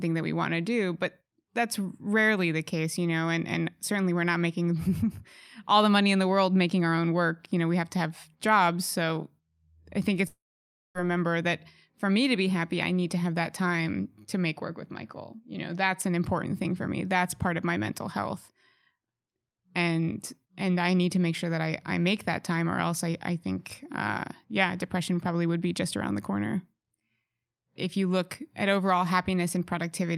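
At 10.27 s, just after "I think", the sound smears into a brief buzzy tail that quickly fades, leaving about 0.58 s of silence before the speech returns at 10.98 s with "remember that for me". This is likely a long network dropout. About 680 ms of audio never arrived, and the receiver stretched the last sound it had to cover the gap. When the stream resumes, the lost stretch is simply skipped.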